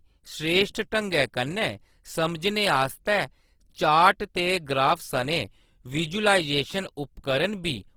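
From start to finish the speech has a grainy, rough texture, with a noisy fizz where the tone should be clean. That's likely Opus compression in its music mode, starved at roughly 16 kbps and filling bands with noise, even though the top still reaches about 20.2 kHz.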